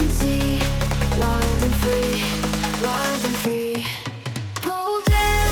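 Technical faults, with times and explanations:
3.19–3.22 s, corrupt frame decoded: a short blip of about 28 ms cuts across the sound, peaking around -20 dBFS. It spans roughly a couple of consecutive compressed frames whose bits were damaged in transit or storage, yet the decoder reconstructed them anyway. Misread spectral codes and scale factors placed energy at frequencies where none belonged, so the listener hears a brief synthetic chirp lasting as long as the bad frames.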